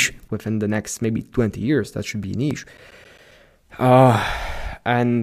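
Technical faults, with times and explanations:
0.28 s onward, sudden gain jump: speech and background noise drop together by about 11 dB at once. An unramped digital gain change is the likely cause.
2.24 to 3.58 s, CD scratch ticks: eleven short ticks, roughly eight per second, the longest around 10 ms. Damaged disc data, patched or muted once per revolution.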